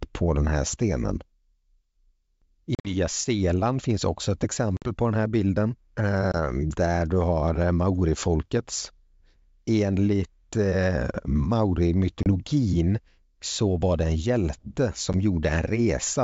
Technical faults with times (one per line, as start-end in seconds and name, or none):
2.75-2.94 packet loss on an ADPCM call
4.77-4.91 packet loss on an ADPCM call
6.32-6.35 packet loss on an ADPCM call
12.23-12.29 packet loss on an ADPCM call
15.13 packet loss on an ADPCM call